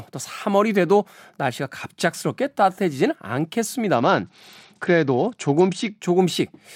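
Speech, with a Bluetooth SBC bit pool drop from 3.95 to 6.01 s: treble dulls and gritty noise creeps in, which fits the bit pool falling from about 28 to 9.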